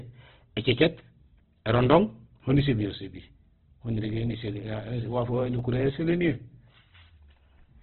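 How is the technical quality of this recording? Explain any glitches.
Quality is rough. The whole clip is heavily codec-damaged, and there's a run of small regular ticks through the middle.

Opus compression: Throughout, the speech is band-limited with nothing above 4.1 kHz, so it sounds dull and phone-like. The remaining band is grainy and rough rather than swirly. That's likely Opus in its music (CELT) mode at a very low bitrate, around 12 kbps. With that few bits, the encoder keeps each band's energy but fills detail with folded or noise content, which produces that gritty texture.

Periodic USB or driver dropouts: From 1.59 s to 5.59 s there's a tick about once a second, roughly five in all. Each time, a tiny sliver of audio, well under a millisecond, is simply skipped rather than replaced by silence. That points to something blocking the USB bus or audio driver on a fixed one-second cycle. 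Because the loss is so short, you hear a small click on the speech, not a gap.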